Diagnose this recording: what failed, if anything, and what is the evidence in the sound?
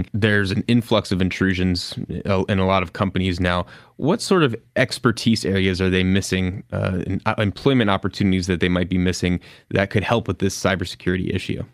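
Nothing failed: no stage of the chain, from capture through conversion, processing, transmission, storage and playback, leaves an audible fault anywhere in the speech.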